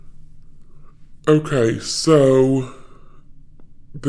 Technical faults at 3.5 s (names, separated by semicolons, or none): wrong sample rate